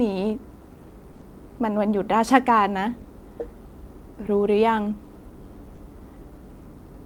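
Brief smears and wobbles interrupt the speech in a quick run at 1.11, 1.15 and 1.19 s, then at 3.01 and 5.75 s. Each is a short concealed packet loss: 20 ms of audio (40 ms at 3.01 s) arrived too late, so the decoder extended the preceding sound before blending back.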